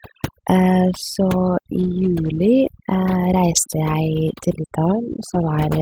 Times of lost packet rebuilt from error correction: 1.79-1.85, 4.27-4.33

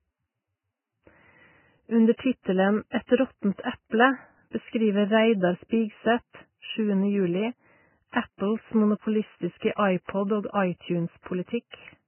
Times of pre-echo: 8.12-8.14, 9.59-9.62, 10.04-10.09, 10.52-10.54

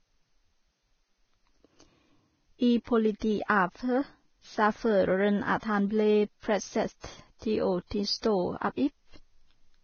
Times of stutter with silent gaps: none

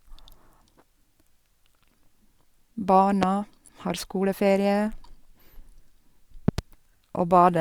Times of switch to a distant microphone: none

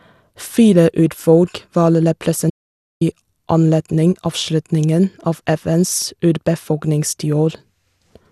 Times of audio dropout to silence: 2.50-3.01

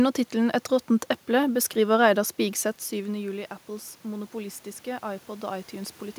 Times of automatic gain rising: 2.38-6.02

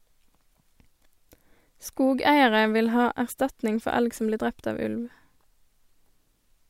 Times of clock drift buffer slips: none

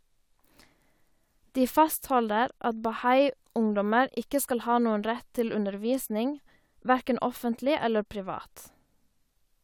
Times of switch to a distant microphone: none

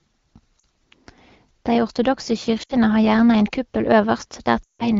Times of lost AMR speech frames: 0.59-0.63, 2.63-2.74, 4.64-4.92

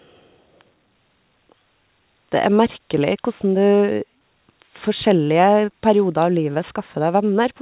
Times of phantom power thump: none

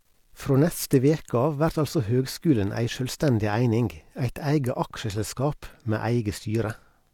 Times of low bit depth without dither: 0.00-3.15

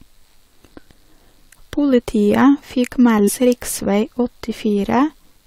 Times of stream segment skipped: 3.27

